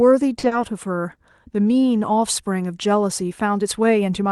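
At 0.39 s the speech briefly hangs: for about 40 ms the last sound is drawn out and held, with a faint buzzy, slightly dipped quality, and at 0.45 s the speech resumes from the same point with nothing skipped. This is a short stall from a late packet. A packet arrived late, the jitter buffer ran dry, and the receiver stretched the previous audio to cover the gap. The 40 ms shift in delay pushes everything after it later by the same amount.

Almost immediately afterward, from 0.47 to 0.53 s, there is a short smear with a slight wobble. This is short concealed packet loss. About 40 ms of audio never reached the decoder. The receiver filled the gap by extending the preceding sound, continuing its pitch where it was voiced and using shaped noise where it was not, then blended back into the real signal. Unlike the stall, this 40 ms is actually lost. Both events ride on an Opus call path whose top end stops around 12 kHz.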